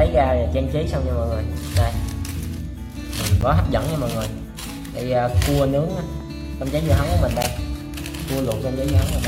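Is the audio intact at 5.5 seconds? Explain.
Yes, the audio is intact at 5.5 seconds, with no dropout, click, distortion or other fault audible at that point.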